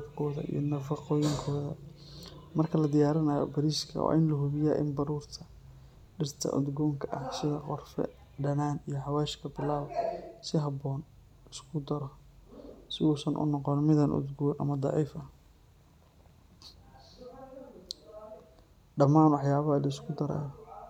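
Listening to this speech recording, nothing technical stood out as a problem at any point.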